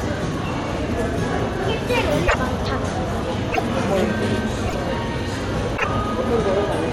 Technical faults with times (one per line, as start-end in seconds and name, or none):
2.26-2.34 broken MP3 bit reservoir
3.51-3.60 broken MP3 bit reservoir
4.66-4.75 broken MP3 bit reservoir
5.76-5.85 broken MP3 bit reservoir